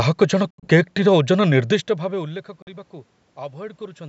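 Abrupt silent holes at 0.50 to 0.68 s and 2.62 to 2.69 s, likely a Bluetooth dropout: the sound resumes as if it had played on, rather than stretching or being concealed.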